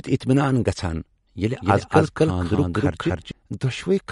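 Speech with plainly audible MP3 compression throughout: the top end stops dead above 11.1 kHz, and the weaker detail swirls and chirps on sibilants as frequency lines drop in and out between frames. That fits a low bitrate, likely around 55 kbps. A fixed, brick-wall treble cutoff combined with that watery flicker points to MP3 rather than simple low-pass filtering or noise reduction. From 1.61 s to 3.31 s there is also a doubled audio track. A second full-band copy runs roughly 0.3 s behind, at about the same level as the original, likely from the signal being captured twice or from two out-of-step copies left in an edit. It is not an echo or reverb tail, because the copy has no decay or room colour and switches on and off abruptly at those times.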